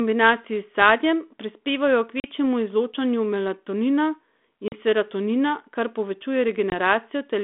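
Packet loss on an ADPCM call cuts three hard-edged silent holes into the speech: 2.20 to 2.27 s and 4.68 to 4.74 s, each about 40 ms of missing audio, roughly two packets, and 6.70 to 6.74 s, about 20 ms, roughly one packet. After each gap the decoder's predictor and step size no longer match the sender's, so the speech comes back slightly distorted. This settles within a few tens of milliseconds, heard across the narrow 250 Hz to 3.5 kHz telephone band of the G.726 path.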